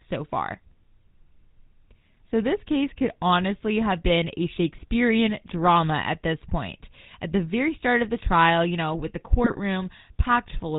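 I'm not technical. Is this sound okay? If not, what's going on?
No. The whole clip has the sound of the GSM full-rate codec, the original mobile-phone speech coding. It rebuilds the voice from a simplified model and drops everything above about 4 kHz. That gives the speech a muffled, buzzy, gravelly roughness throughout.

At 9.44 to 9.6 seconds, just after "you know with the", there are GSM bit errors. Corrupted data reached the decoder, so a few short stretches of sound were rebuilt wrongly. You hear them as a brief burst of squawking and gargling.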